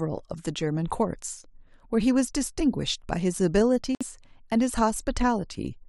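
Speech, with one dropout from 3.95 to 4.03 s: the sound stops dead for 57 ms, then resumes. The waveform shows a flat gap, and the spectrogram shows a blank vertical band at all frequencies. This is likely a Bluetooth stall, with delayed packets draining the playback buffer.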